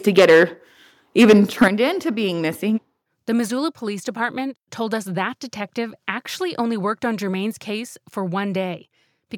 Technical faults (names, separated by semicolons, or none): microphone overload; microphone volume stepped down